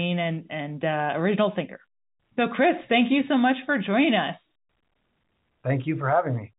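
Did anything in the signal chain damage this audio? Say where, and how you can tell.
No damage in the chain; telephone coding passes the speech.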